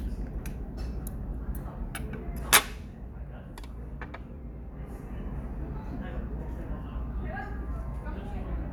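No technical faults are audible anywhere in this sound.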